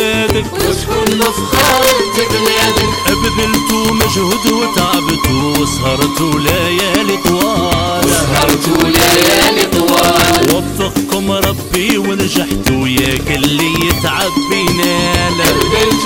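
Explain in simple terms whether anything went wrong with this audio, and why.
Yes, something went wrong: all the way through, the loudest moments break into sharp, violent cracks, harsher than ordinary distortion. This is integer overflow. The sound was pushed slightly too loud, and the rare peaks that went over the limit wrapped around to the opposite extreme instead of being held back.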